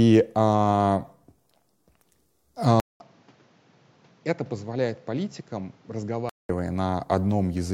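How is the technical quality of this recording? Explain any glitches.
One fault affects the middle of the recording. From 2.8 to 6.49 s, a 200 ms gap, then duller, quieter sound, about 10 dB lower, cut above 7.6 kHz, with new background noise. Likely the input switched to a poorer device.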